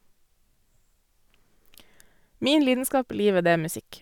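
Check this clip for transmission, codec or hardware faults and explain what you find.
Nothing in this speech recording points to a problem in how it was sent, encoded or captured. There is nothing further to report.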